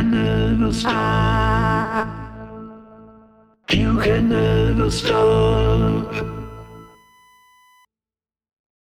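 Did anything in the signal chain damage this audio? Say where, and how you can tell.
Yes. From 3.99 s to 7.85 s a steady whine sits at exactly 1 kHz, roughly 35 dB below the programme. This is USB whine entering through the analogue wiring: the bus draws current in 1 ms frames, and that ripple leaks through the shared power or ground into the audio path. Mains hum would sit at 50 or 60 Hz and its harmonics, not at 1 kHz. The fixed 1 kHz pitch ties the whine to the USB frame rate.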